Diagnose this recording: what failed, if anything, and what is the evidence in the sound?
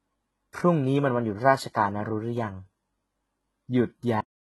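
Codec stage: heavy HE-AAC compression is the likely cause. Its replicated treble sounds false and metallic on sibilants, and the spectrogram shows copied upper bands above the crossover. It fits roughly 16 kbps.

Buffer or storage stage: a cut-off end at 4.21 s. The sound stops mid-utterance with no decay. The waveform drops flat to silence, a sharp vertical edge on the spectrogram.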